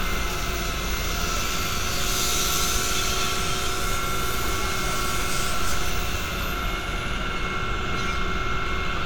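Throughout, the sound carries smeared, swirly artefacts, likely low-bitrate audio saved at a high bitrate. A clean high-bitrate MP3 wouldn't smear, and nothing appears above 18.5 kHz.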